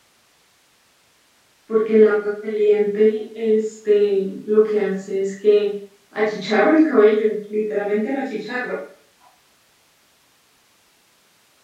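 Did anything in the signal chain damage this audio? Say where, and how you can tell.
No, nothing audible in this speech points to damage at any stage of the chain.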